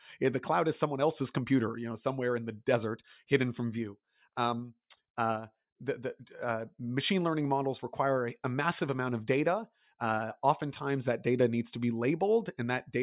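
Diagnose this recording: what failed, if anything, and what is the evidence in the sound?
Nothing failed in this recording, and the sound gives no evidence of a fault at any stage.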